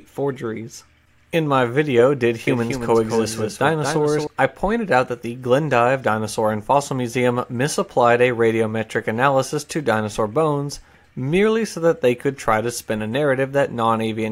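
From 2.47 to 4.27 s the audio plays twice: a dry, full-band copy trails about a fifth of a second behind, roughly 5 dB quieter, cutting in and out abruptly. This is a doubled audio track, likely from a second, slower capture path.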